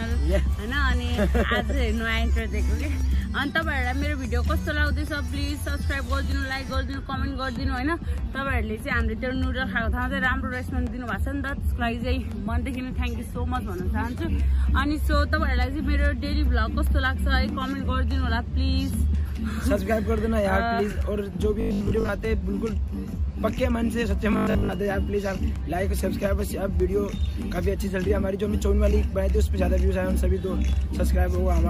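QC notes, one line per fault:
21.61–22.09 s and 24.33–24.73 s: robotic sound from repeated short buffers. The sound becomes a rigid, metallic buzz pitched at 50 Hz, with about half, then most, of the audio skipped. This is likely a 20 ms buffer looping while fresh audio arrived too late.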